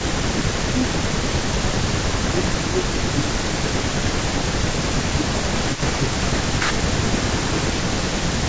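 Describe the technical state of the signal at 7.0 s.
At 7.0 s an echo leak runs through the whole clip, from 0 to 8.48 s. A delayed copy of the speech trails about 250 ms behind, roughly 10 dB below it, likely because a far-end loudspeaker echo was not fully cancelled. Unlike reverberation, it is a distinct repeat rather than a smooth decay.

The same moment falls inside speech suppressed in double talk, from 4.52 to 7.7 s. The talker's level dips by up to about 10 dB in scattered pieces totalling around a second and a half, likely because the echo canceller turned everything down while both sides spoke. These are gain dips, not the added repeats of the echo.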